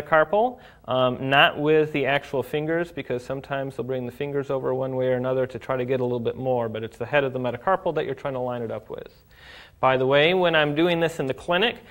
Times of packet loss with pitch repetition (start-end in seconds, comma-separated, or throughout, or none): none